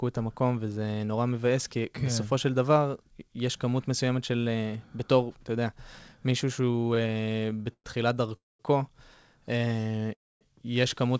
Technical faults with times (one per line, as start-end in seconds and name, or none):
6.62-7.87 repeated stalls (stutter)
8.36-8.62 call audio freeze
9.58-10.11 repeated stalls (stutter)
10.14-10.44 call audio freeze